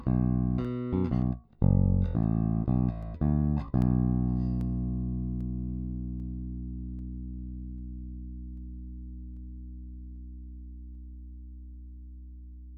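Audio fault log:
0.65 to 12.53 s, clock drift buffer slips: a regular click every 0.79 s, about fifteen in all, likely from two clocks about 500 ppm apart, so a buffer drops or repeats roughly fifteen samples. The waveform shows small steps, and the spectrogram shows evenly spaced thin vertical broadband lines.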